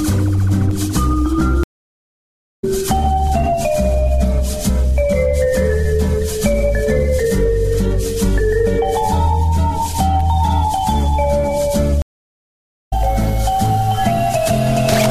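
Two stream reconnects break the sound. At 1.63 s the audio drops to silence for about 0.95 s, then resumes near 2.64 s roughly 0.7 s further on, with a fresh decoder starting mid-stream and a brief fade-in. At 12.02 s the same happens: 0.86 s of silence, resuming around 12.93 s roughly 0.7 s ahead.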